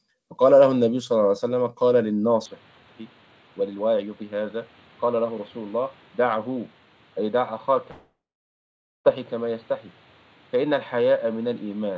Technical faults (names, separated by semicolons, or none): input switched to a poorer device; long network dropout